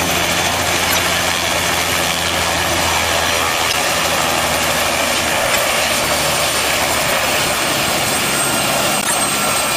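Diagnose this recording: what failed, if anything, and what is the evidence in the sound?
Chirping noise bursts at 0.88–0.99, 3.68–3.74, 5.53–5.59 and 9.01–9.14 s, the last near full scale: corrupt frames decoded at the codec, flipped bits misplacing spectral energy.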